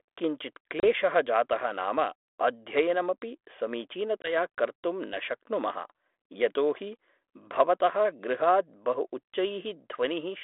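At 0.8 to 0.87 s, just before "जातः नाम अध्ययनमपि", and again at 4.23 to 4.35 s, the speech shows packet loss on an ADPCM call. A hard-edged hole of about 30 ms and then about 20 ms, a few packets each, is followed by a slightly distorted restart. A plain dropout would resume cleanly. Here the decoder's predictor and step size have lost track of the sender's and take tens of milliseconds to settle on the narrowband telephone line.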